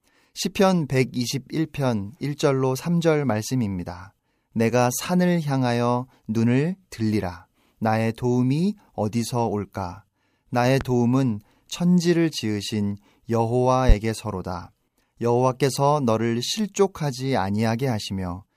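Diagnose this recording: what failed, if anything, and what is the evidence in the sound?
Loud pop at 10.81–10.85 s and 13.89–13.93 s: single sharp pops about 10 and 20 dB over the continuing speech, likely voltage spikes in the analogue wiring.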